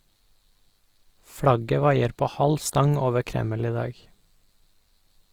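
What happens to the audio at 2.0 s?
Likely Opus compression at 2.0 s, as throughout: bits run short, so bands are filled with noise, leaving the speech rough and grainy, which fits a low bitrate near 24 kbps.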